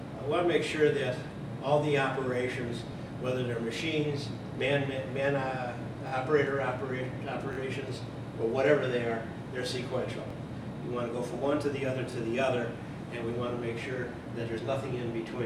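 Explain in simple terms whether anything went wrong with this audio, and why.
A repeated buffer caused brief stutters at 2.92–2.94, 6.08–6.12, 7.53–7.57, 10.30–10.33 and 12.12–12.14 s. Fresh audio arrived late, so the device replayed its last 21 ms chunk, which fits a 1024-sample buffer, once or twice, with a hard join each time.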